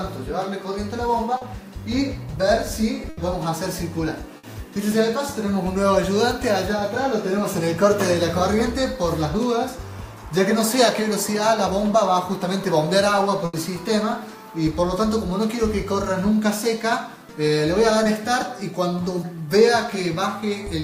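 At 1.37 to 1.43 s there is a short concealed packet loss: 40 ms of audio arrived too late, and the receiver bridged it by extending the preceding sound, leaving a brief smear or wobble. At 3.09 to 3.19 s comes a burst of packet loss, with 80 ms missing. The concealment holds the last sound and lets it fade, so it is a buzz or hiss rather than a smear, and the audio picks up further along. Similar bursts follow at 4.37 to 4.45 s (60 ms) and 13.45 to 13.55 s (80 ms). A second short loss at 18.03 s fills only 20 ms.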